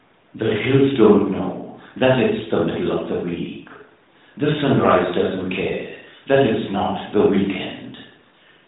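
No technical faults can be heard in this recording.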